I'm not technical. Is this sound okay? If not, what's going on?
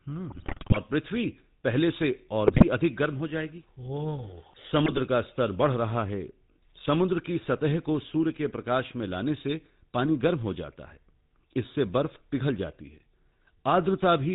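No, it isn't. The whole clip has been squeezed through the GSM full-rate codec, the old mobile phone voice format. It keeps only a rough sketch of the voice and throws away everything above 4 kHz, so the speech sounds buzzy, gravelly and muffled the whole way through.

On top of that there are GSM bit errors, where a weak phone signal scrambled bits of the data. The voice briefly breaks into squawks, pops and gargling from 0.3 to 0.77 s, again from 2.46 to 2.65 s, and from 4.83 to 5.0 s.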